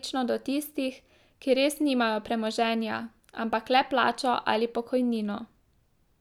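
Nothing here catches the ear as a technical problem, so there's no fault to point to anywhere in this bit of speech.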